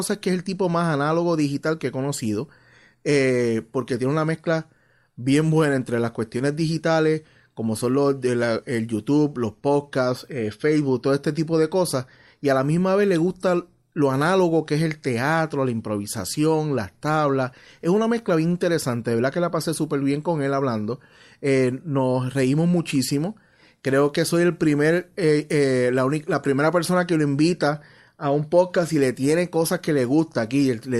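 No audible technical faults anywhere in the recording.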